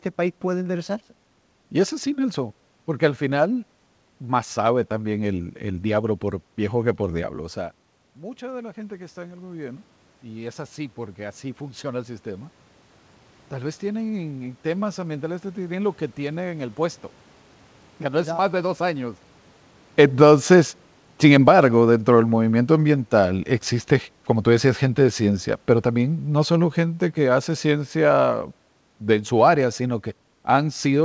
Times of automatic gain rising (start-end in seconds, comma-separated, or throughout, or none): 7.65-16.83